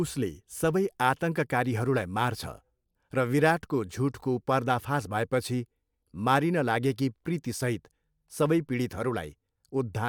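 No technical faults can be heard anywhere in the recording.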